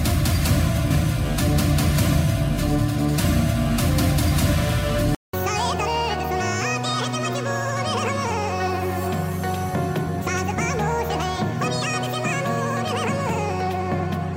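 From start to end, the audio is read two samples at a time (double speed): the reader treats each pair of samples as one frame, as if expecting two channels or wider samples. Everything plays twice as fast and a full octave, 12 semitones, higher.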